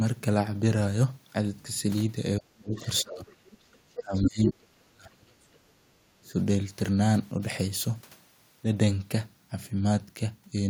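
From 2.38 to 2.85 s the speech sinks sharply, by about 30 dB at its deepest, and is likely speech suppressed in double talk: with both sides speaking at once, the echo canceller could not tell its own talker from loudspeaker echo and turned everything down. Near the end of that dip, 2.76 to 2.85 s, a faint second voice about 25 dB under the speech comes through, likely the other side's voice leaking through where the canceller left some loudspeaker sound in the microphone signal. The speech drops again from 3.02 to 3.27 s, by about 20 dB, and a very faint scrap of the other voice, around 40 dB down, appears at 3.73 to 3.77 s. The longest dip runs from 3.94 to 5.43 s, up to about 35 dB deep, and between 4.0 and 4.31 s the leaked voice is as loud as the speech itself. Another faint scrap, about 40 dB down, follows at 5.54 to 5.59 s, and a short dip of about 25 dB comes at 6.2 to 6.35 s.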